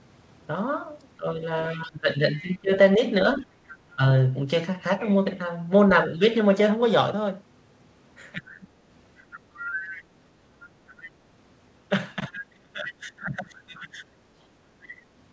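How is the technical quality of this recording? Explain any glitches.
The recording has two recurring faults tied to echo cancellation on a call. The audio is band-limited to 8 kHz, which fits the G.722 codec at 64 kbps.

Speech suppressed in double talk: from 1.17 to 4.02 s, 8.33 to 8.66 s and 12.16 to 14.03 s, the speech dips in level, by roughly 20 dB and by about 25 dB in the last span. The likely cause is the echo canceller ducking the talker while both sides spoke at once.

Other side's voice leaking through: faint second-voice scraps sit underneath the speech at 1.73 to 2.58 s, 9.34 to 10.03 s, 11.03 to 11.1 s and 14.84 to 14.93 s. They run about 25 dB below the speech, and around 15 dB below at 9.34 s. This is likely loudspeaker echo that the canceller did not fully remove.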